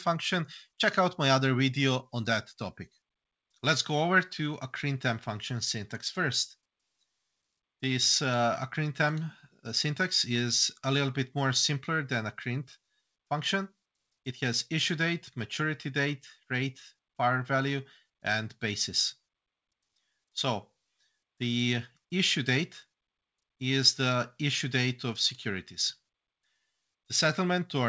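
No technical faults can be heard; the audio has come through a working call path, carrying the ordinary texture of wideband call coding and nothing above 8 kHz, which fits G.722 at 64 kbps.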